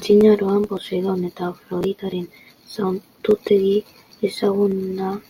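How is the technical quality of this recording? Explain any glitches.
The speech has two skips, at 1.99 s and 3.94 s. Both are audio missing between chunks. Each time, about 50 ms of sound drops out. The two sides are joined directly, with no silence in between. The skips are about 2 seconds apart. That spacing likely points to a recorder working in 2-second blocks, which loses a short piece while closing one block and opening the next. Each skip is heard as a small jump forward in the sound.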